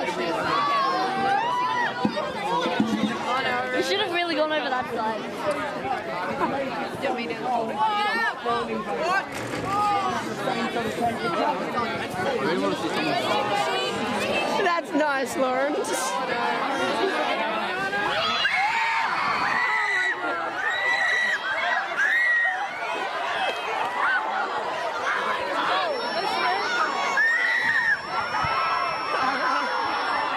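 A speaker-to-microphone loop likely poised at feedback sustains a thin 5.4 kHz feedback whistle, about 20 dB under the sound, from 25.81 s to the end.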